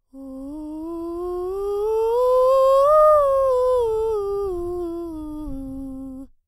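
No technical fault can be heard anywhere in this music recording, with no break in the signal and no disturbance from the chain that carried it.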